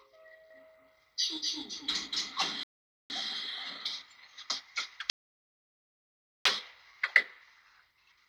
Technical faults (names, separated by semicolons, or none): doubled audio track; rebuffering stall